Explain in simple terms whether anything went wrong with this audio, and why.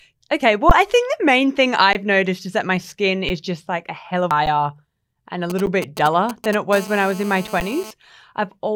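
Underrun with held sample, at 0.70 s, 1.93 to 1.95 s, 3.29 s, 4.46 s, 5.66 s and 7.60 s. The playback buffer briefly ran dry, so the output froze at its last value for about 10 to 20 ms. The speech stops dead, a small slice is lost, and it resumes.

Damaged data in a compressed stream, at 4.31 s. A piece of the compressed file was corrupted, so the decoder could not read that stretch properly and had to hunt for the next clean starting point. The result is a brief chirp or blip.

GSM signalling bursts, from 5.50 to 6.55 s. A nearby 2G mobile phone was talking briefly to its network, the way it does before a call or text arrives. The audio circuitry picked up those radio pulses, producing a galloping dit-dit-dit of short buzzes.

GSM phone buzz, from 6.73 to 7.91 s. The same kind of phone was now on a call, transmitting in pulses 217 times a second. The equipment turned that radio energy into sound, a harsh, raspy, steady buzz at 217 Hz that has nothing to do with the speech.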